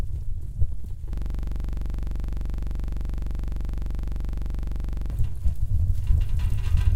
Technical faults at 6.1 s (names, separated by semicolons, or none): none